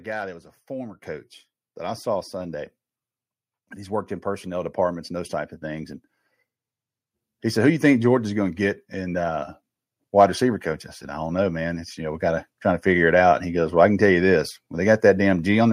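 At 1.02 s the call software judges the microphone too quiet and raises the device's input volume in a single step, a microphone volume stepped up of about 7 dB. Speech and room background jump louder together, an abrupt lift rather than a fade. At 9.99 s it steps the input up again, this time by about 2 dB, a smaller but still sudden rise that lifts voice and background in equal measure.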